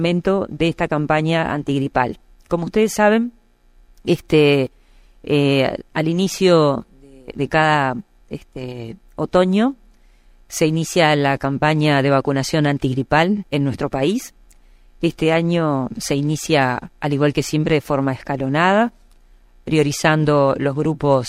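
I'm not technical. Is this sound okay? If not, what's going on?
Yes, nothing wrong here.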